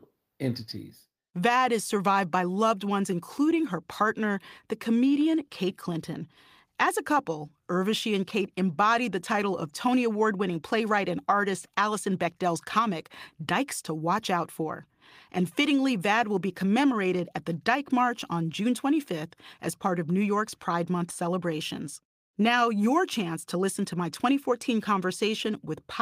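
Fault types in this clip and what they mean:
No technical fault can be heard anywhere in the recording. The speech carries no dropouts, distortion or timing disturbances that a listener could point to.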